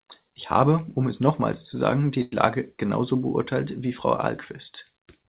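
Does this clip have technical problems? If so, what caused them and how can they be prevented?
Yes. After "nochmals zu sagen die", 2.22 to 2.34 s, a sound hangs with a slight buzz or dip: a short stall from a late packet, where the emptied jitter buffer stretched audio 97 ms. A deeper jitter buffer or steadier network would prevent it.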